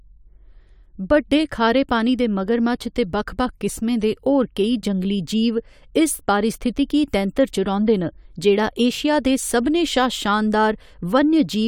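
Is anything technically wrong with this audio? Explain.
No, nothing technically wrong stands out in this speech recording, so there's no fault to point to here.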